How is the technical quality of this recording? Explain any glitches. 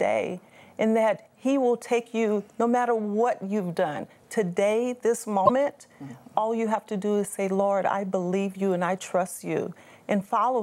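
Two glitches mar the recording, both in its middle section.

From 3.19 to 5.25 s there is sample clock jitter. The converter's clock wanders by around a microsecond and a half, so samples land slightly off-time, with errors largest on steep waveform slopes. This adds a hiss-like roughness about 40 dB below the signal that grows on loud, bright passages.

From 5.45 to 5.50 s there is a glitch with a skip forward. The likely cause is a broken MP3 bit reservoir: frames were lost, so the next frame drew its borrowed data from the wrong bytes. The 56 ms disturbance fits roughly two 26.1 ms frames decoding badly.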